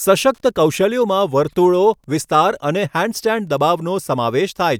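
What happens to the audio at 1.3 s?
At 1.3 s you're hearing the same Wi-Fi interference that runs under the whole speech clip, not anything specific to that moment. A Wi-Fi radio sitting close to the audio circuitry sends a beacon every 102.4 ms, and the circuit rectifies those RF bursts into the audio band. So there's a steady faint ticking at roughly ten per second, sitting well down, around 45 dB below the speech.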